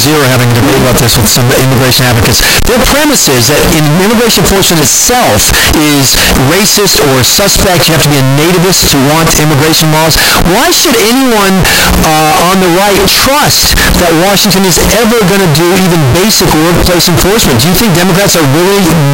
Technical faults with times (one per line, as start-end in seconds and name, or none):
0.00-19.14 float read as integer